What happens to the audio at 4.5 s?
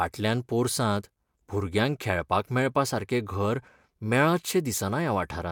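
At 4.5 s the speech carries straight through with no audible fault.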